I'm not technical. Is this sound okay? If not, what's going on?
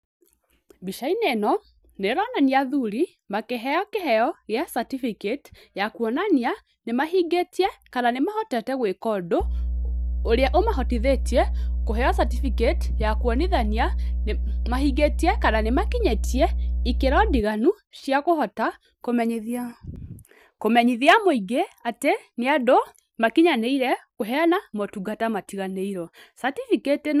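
No. From 9.40 s to 17.40 s there is mains hum: a steady, low buzzing tone at 60 Hz sitting under the speech, roughly as loud as the speech itself. It comes from the electrical supply leaking into the recording, through a ground loop between connected equipment or a transformer close to the microphone or cables. The hum is present only between those two times, so it is confined to that eight-second stretch.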